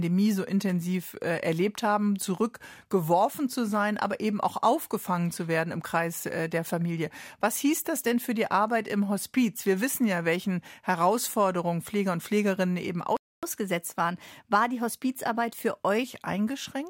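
Playback stall at 13.17 s: the speech cuts to silence for 0.26 s, until 13.43 s, likely because the player ran dry of data or its thread was blocked. Catch-up at higher speed follows from 13.43 to 16.04 s, where the speech runs 1.1 times fast, raising pitch about one and a half semitones while the player works off its backlog before returning to normal.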